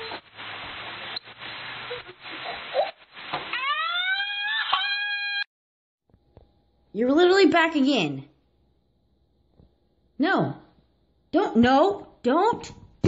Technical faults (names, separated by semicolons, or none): none